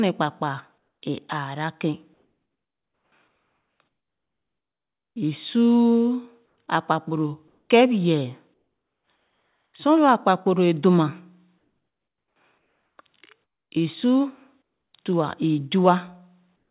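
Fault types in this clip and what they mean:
Comfort noise in place of the background: in the speech pauses at 2.14–5.16 s, 6.46, 7.48, 8.54–9.74, 11.58–12.98, 14.62 and 16.56 s to the end, the real room sound drops out and a flat, featureless hiss takes over, most obviously about 8 dB quieter at 14.62 s. That's likely discontinuous transmission, with the receiver synthesising noise while the sender goes quiet. The hiss stops at 4 kHz like everything else, which fits a narrowband G.711-style call.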